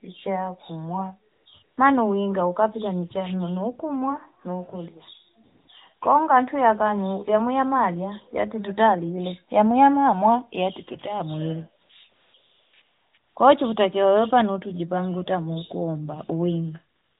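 Speech over narrowband mobile audio, with pauses repeatedly replaced by a smooth, steady hiss that switches in and out. There are ten such gaps, 60 to 360 ms long, between 1.32 and 17.19 s, clustered around 12 to 13 s. This is AMR comfort noise: the sender judged silence, stopped sending speech frames, and the receiver synthesised filler noise.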